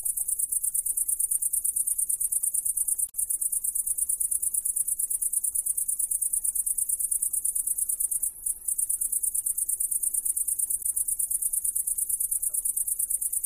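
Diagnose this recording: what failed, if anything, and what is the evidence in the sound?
The codec stage failed: there is damaged data in the compressed stream at two points, 3.05 to 3.13 s and 10.79 to 10.85 s. Each is brief, under a tenth of a second. Corrupted bytes made the decoder misread those frames and lose sync until it found a valid frame header. Unlike a buffer underrun, which leaves a gap or a click, the decoder here was misreading damaged frames rather than running short of data.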